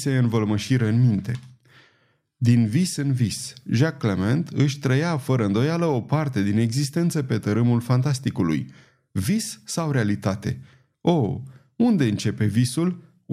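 No technical faults are audible anywhere in this speech recording.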